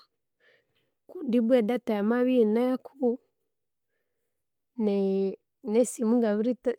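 No audible fault turns up anywhere in the recording; nothing in it calls for a fix.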